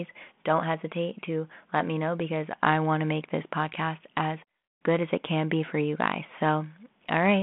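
Speech carried over a telephone-band link at 32 kbit/s, limited to roughly 200 Hz to 3.5 kHz, with no fault to report.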